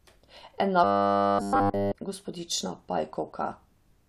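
From 0.84 s to 1.93 s the speech takes on robotic sound from repeated short buffers: essentially the whole stretch is a rigid, metallic 100 Hz buzz, which fits a 10 ms block being looped, likely because new audio arrived too slowly and was skipped.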